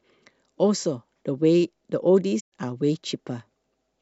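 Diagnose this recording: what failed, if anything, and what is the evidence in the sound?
Speech fades into a soft-edged hole from 2.39 to 2.52 s. This is codec-stage AAC frame loss with muting: the decoder zeroed 128 ms, which fits six lost frames.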